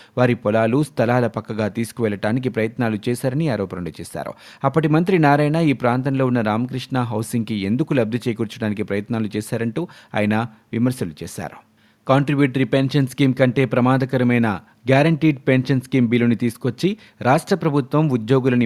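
No technical faults can be heard anywhere in the speech recording; the signal stays continuous and steady throughout.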